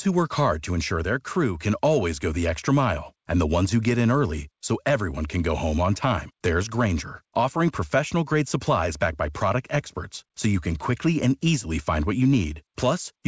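No technical faults occur anywhere in this speech, which comes through a call path that leaves nothing above 8 kHz.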